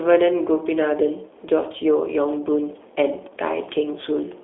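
From start to finish the speech carries G.729 codec damage: a slightly rough, synthetic texture with plainly audible coding artefacts, consistent with an 8 kbit/s G.729A stream. The codec rebuilds each 10 ms frame from a vocal tract filter, a pitch predictor and a few pulses instead of the actual waveform. The band is confined to a telephone line of roughly 300 Hz to 3.6 kHz, with nothing above 3.7 kHz.

From 3.06 s to 4.33 s a train of clicks ticks over the sound at a regular pace of about 4.8 per second, roughly seven in all. Each is a short pulse of much the same shape, peaking at around the level of the speech itself, and the clicks continue through any gaps. The likely cause is electrical interference from nearby equipment or a faulty connection or power supply.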